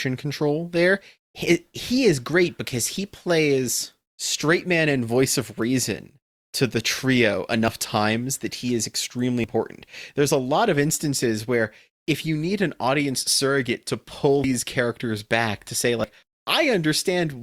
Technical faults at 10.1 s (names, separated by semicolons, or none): none